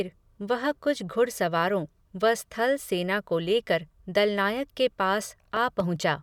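At 5.57 s a loud pop lands on the speech: two sharp pops within about a quarter of a second, ending by 5.84 s, peaking a few decibels above the speech, which carries on underneath. The likely cause is a sudden voltage step or pulse, such as a plug, switch or static discharge, passing through the circuitry. On a waveform it shows as two tall, narrow spikes; a spectrogram shows two thin vertical lines spanning the full frequency range.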